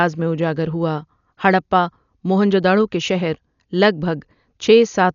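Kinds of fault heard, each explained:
Dolby Digital compression, throughout: the speech is dull, with nothing above about 6.9 kHz, and a rough, fluttering noise clings to the voiced sounds. This is likely the work of an AC-3 style encoder starved of bits, which fits a rate near 48 kbps. It cuts the top of the band and leaves many frequency lines without mantissa detail, so the decoder fills them with dither noise, giving the heavy, grainy damage heard here.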